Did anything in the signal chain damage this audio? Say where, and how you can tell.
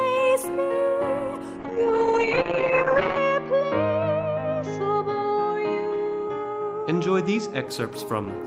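Yes, there's a call bitrate drop at the codec stage, from 1.61 s to 7.71 s. The top end collapses from a full 20 kHz band to about an 8 kHz ceiling, and the sound turns rough and muffled, worst for about 1.57 s at the bottom of the dip. That fits the bandwidth estimate falling and the encoder being pushed from roughly 32 kbps down toward 8 kbps, so it quantises coarsely and trims the highs until the rate recovers.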